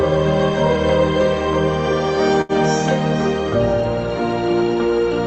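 At 2.41 s a short stall from a late packet holds the sound for about 77 ms, through 2.52 s. The jitter buffer ran dry, so the receiver stretched the last stretch of audio until the packet arrived, then resumed at the same point. Nothing is lost, but playback runs 77 ms later afterwards. It sounds like a brief drawn-out smear with a faint buzz or dip. A spectrogram shows smeared, repeated frames against the call codec's 8 kHz ceiling.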